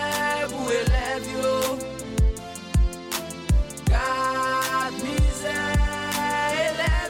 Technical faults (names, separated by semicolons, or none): none